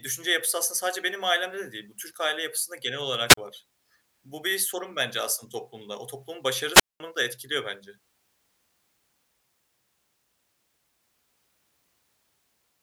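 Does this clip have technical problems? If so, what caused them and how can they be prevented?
Yes. Hiss swells, then the speech drops into near silence at 3.28–3.37 s (a 37 ms hole) and 6.73–7.00 s (205 ms): a wireless microphone squelch dropout, where the FM radio signal fades and the receiver's squelch mutes the output. Better antenna placement and line of sight to the transmitter prevent it.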